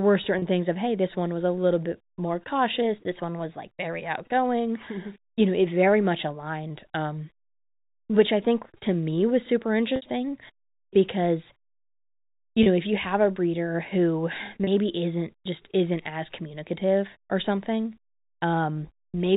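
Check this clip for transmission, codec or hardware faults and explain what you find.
Two faults recur in this speech clip, heard through G.711 telephone coding that band-limits the sound below 4 kHz.

Packet loss with pitch repetition occurs at 0.39–0.42 s, 9.96–10.02 s just after "to me was super", 12.63–12.66 s just before "know if you have", and 14.64–14.67 s. Each time, audio went missing and the receiver filled the gap by repeating the last pitch period while fading it out. The 30 ms gaps come through as a brief held, buzzy tone. The 60 ms gap at 9.96 s runs long enough for the repetition to fade almost to silence before the speech cross-fades back in.

Two abrupt speed-and-pitch shifts are heard, likely the result of a drift correction step. Clock-matching software seems to have changed the playback rate in one jump to rebalance its buffer. After "a little bit more", from 2.82 to 4.01 s, the speech runs 6.2% fast and about a semitone sharp. 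From 6.70 to 7.27 s it runs 6.2% slow and about a semitone flat, then snaps back to normal.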